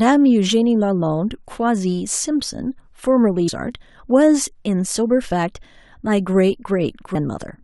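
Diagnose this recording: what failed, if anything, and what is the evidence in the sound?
The codec stage failed: there is damaged data in the compressed stream. Two brief glitches interrupt the speech, at 3.47 s and 7.14 s, each lasting under 20 ms. At those points the compressed bytes are corrupted, so the decoder cannot parse the affected frames, loses frame sync and scans forward for the next valid header. The garbled frame produces the glitch.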